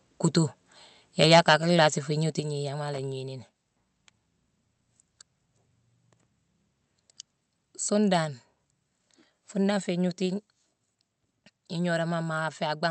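From 1.21 to 1.54 s the loudest syllables turn harsh and crackly. This is microphone overload, likely caused by the input volume being set too high. Peaks push about 7 dB past the converter's limit. A few percent of samples have their tops flattened.

At 1.39 s, during that overload, the level drops by about 3 dB in one step. Voice and background fall together. This is the microphone volume stepped down, likely by the call software reacting to the clipping. It happens again at 2.40 s, this time by about 5 dB.

From 2.94 to 2.98 s there is a short, irregular burst of crackle and scratching. This is loose connector crackle. A worn or dirty contact makes and breaks as it moves. That chops the signal into rough fragments.

At 8.25 s and 10.26 s the level steps down again, by about 2 dB each time. These later drops come without a distorted peak before them. The Opus call path, with its audio band limited to about 8 kHz, carries all of this.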